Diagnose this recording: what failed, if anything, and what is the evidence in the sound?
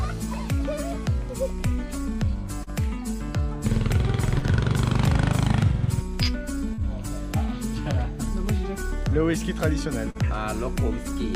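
Network stage: short concealed packet loss, 40 ms each at 2.63, 4.38, 6.74 and 10.11 s; the decoder extended the preceding sound and blended back, leaving brief smears.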